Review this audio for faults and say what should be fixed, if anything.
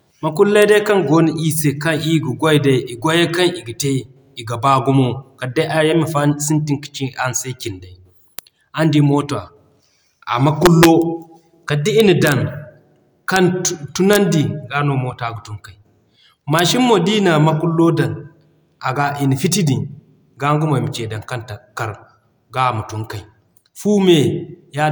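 Integer overflow cracks occur at 0.62, 8.39, 10.66–10.85, 12.00–12.32, 13.36, 14.13–14.16 and 16.59 s. Peaks barely reaching full scale, at most about 1 dB over, wrap to the opposite extreme instead of being held at the limit. Saturating arithmetic or a limiter before conversion would prevent it.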